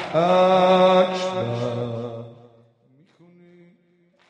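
From 1.74 to 2.96 s, zipper noise: a level drop of about 25 dB is applied in coarse, unsmoothed steps, around a hundred a second, producing a buzzy ticking. The waveform shows a staircase envelope, and the spectrogram shows thin, evenly spaced vertical broadband lines.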